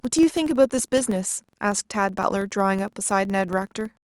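From the first moment to the end, the speech carries a regular ticking at about 21.5 Hz, fused into a low buzz. The cause is a filter restarted on every block. The filter discards its internal state at each block boundary and begins again from silence, so every block opens with a small transient. The repetition rate fits a 2048-sample block. The buzz rises and falls with the loudness of the speech.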